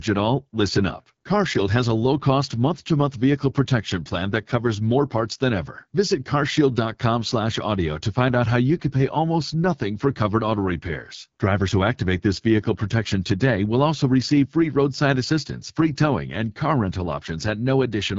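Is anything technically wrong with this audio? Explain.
Yes, the speech has been through a low-rate voice codec.

AMR wideband (HD Voice) codec, throughout: a pulse-excited vocal tract model with noise-filled highs leaves speech rough and raspy, nothing above 7.6 kHz, which fits 8.85 kbit/s.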